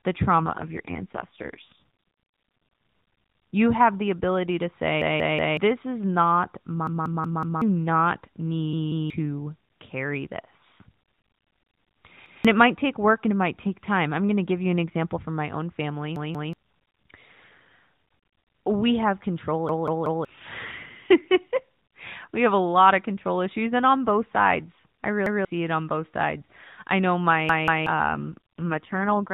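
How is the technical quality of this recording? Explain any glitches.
The quality is compromised by two faults over a narrowband AMR mobile link, with nothing passing above 4 kHz.

AMR rate drop, 0.38 to 1.83 s: a weak radio link forces lower-rate coding, consistent with about 4.75 kbps instead of 12.2, so the speech turns rougher and more synthetic.

Repeated buffer at 5.02, 6.87, 8.73, 12.26, 16.16, 19.69, 25.26 and 27.49 s: late audio makes the device replay its last block, about 0.19 s long (which fits an 8192-sample buffer). Each event repeats one to four times with hard joins, and up to roughly half a second to three quarters of a second of audio is lost.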